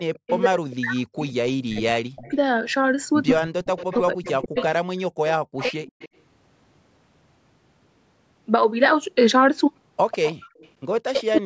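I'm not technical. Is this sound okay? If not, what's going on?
No. Two problems overlap here.

Echo leak: from 0 to 2.33 s, 3.41 to 6.09 s and 10.11 to 11.38 s, a fainter copy of the speech repeats about 0.15 s later. It is a distinct repeat, not room echo, and most likely comes from a loudspeaker sound leaking back into a microphone.

Speech suppressed in double talk: from 0.26 to 2.34 s, 3.3 to 5.85 s and 11.02 s to the end, the speech sinks to nearly silent in patches (about a second and a half, a second, then a brief moment). This is likely because both sides talked at once. Unlike a connection dropout, it happens only when both sides talk at once.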